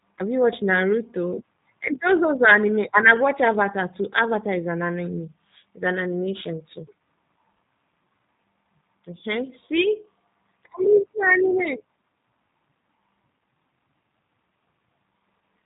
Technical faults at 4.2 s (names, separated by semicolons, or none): G.729 codec